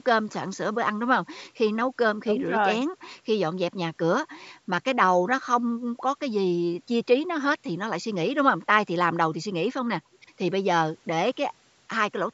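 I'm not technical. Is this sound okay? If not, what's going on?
Yes, nothing stood out on listening; it sounds like ordinary speech that has been through the usual microphone processing of a call.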